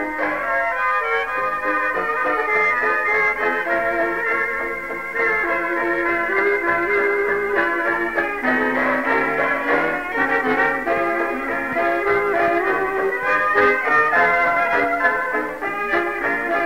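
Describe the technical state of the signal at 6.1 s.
At 6.1 s the signal is intact, with no dropout, distortion or other technical fault to be heard at that moment.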